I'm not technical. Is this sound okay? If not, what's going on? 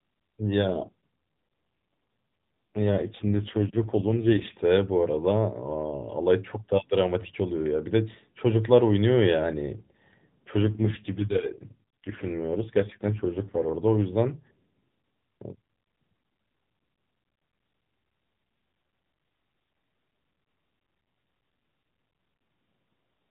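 No, not entirely. Twice, from about 0.68 to 4.56 s and again from 10.62 to 13.77 s, the speech turns rough, buzzy and a bit robotic, then comes back. That's an AMR rate drop. This is mobile-phone audio, and when the radio signal gets weak the network tells the phone's codec to use fewer bits for the voice so more can go to protecting against errors. There's no gap and no loss of loudness, just a harsher, more synthetic sound until the connection recovers.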